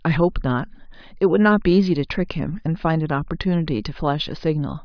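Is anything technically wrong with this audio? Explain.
No, there's nothing technically wrong to point to in this speech clip; it sounds fine all the way through.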